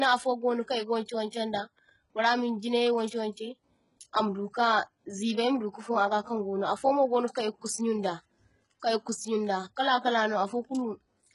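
Throughout the speech, the treble sounds gritty and lispy up to an 11.1 kHz ceiling, likely HE-AAC compression at a very low bitrate, near 12 kbps, rebuilding treble rather than simply dropping it.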